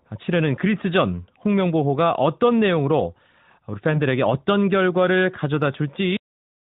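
At 6.17 s the speech stops dead in the middle of a sound: a cut-off end, where the final stretch of audio was never written out or played. Rather than decaying, the signal drops straight to digital silence for the remaining half second or so. On the waveform the envelope ends abruptly mid-sound and becomes a flat line. On the spectrogram, the energy, already confined below 4 kHz by the narrowband mobile codec, ends in a sharp vertical edge followed by blank space.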